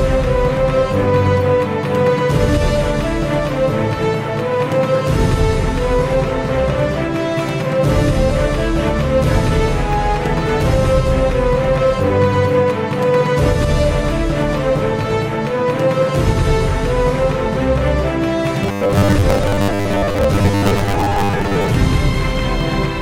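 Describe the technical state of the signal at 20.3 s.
At 20.3 s the sound has a rigid, metallic buzz near 100 Hz, part of robotic sound from repeated short buffers spanning 18.63 to 21.76 s. The likely cause is audio arriving too seldom, so roughly half the signal is refilled by repeating 10 ms chunks.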